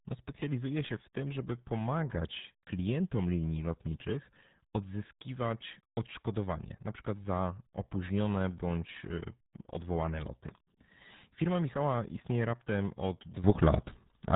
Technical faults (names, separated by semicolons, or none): RealAudio 14.4 codec; sudden gain jump